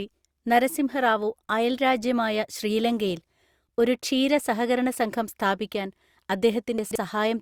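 At 6.78 to 6.96 s, chunks out of order: a 43 ms chunk plays three chunks late, producing a jumbled moment. Unlike a dropout, nothing is missing.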